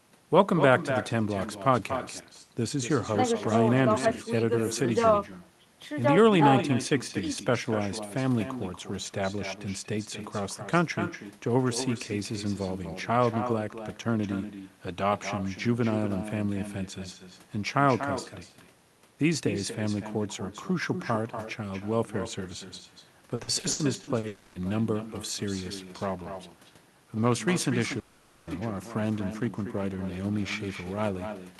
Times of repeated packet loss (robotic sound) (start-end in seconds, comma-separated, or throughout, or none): 23.35-24.26